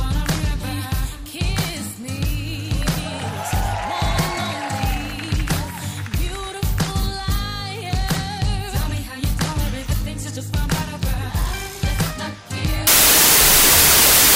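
From 12.87 s to the end of the clip there is a wrong sample width fault: audio stored as 32-bit integers is read back as 16-bit integers. Each original sample is split into two values. The upper half still follows the real signal, but the lower half is essentially random bits. The result is loud, harsh noise with the original sound buried inside it, playing at half speed and an octave low.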